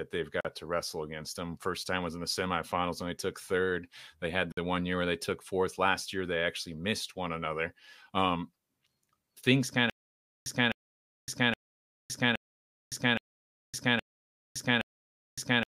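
A speech recording with two brief dropouts and a stutter that runs to the end. The first Bluetooth stall comes at 0.41 s. The sound drops to silence for 43 ms, then resumes on "to wrestle against them". A second stall hits at 4.52 s and lasts 53 ms, ending just before "the one year where". These are likely wireless link stalls, where the headphone buffer ran empty until delayed packets arrived. From 9.90 s, right after "things kind", the audio turns into a stutter with silent gaps. A 256 ms fragment plays, then 563 ms of digital silence follows. The cycle repeats every 819 ms, seven times, until the clip ends. The stream likely stalled, replaying its last fragment at each retry. The speech that belonged in those gaps is gone.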